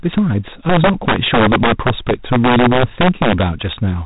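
Integer overflow runs through the whole speech clip. Peaks driven about 8 dB too hot wrap to the opposite sign, so a few percent of samples snap into violent cracks. G.726 ADPCM coding is also present throughout. Nothing passes above 3.8 kHz, and a harsh rasping hiss rises and falls with the speech level, which fits 24 kbit/s.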